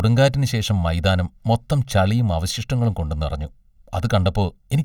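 Speech, hollow and phasey from start to finish, with a fixed coloration that points to channel delay (comb filtering). One channel trails the other by roughly one and a half milliseconds, and when the two are folded to mono the shared signal cancels at regularly spaced frequencies. The first notch falls around 300 Hz, with further dips repeating at roughly two-thirds of a kilohertz intervals above it, thinning the body.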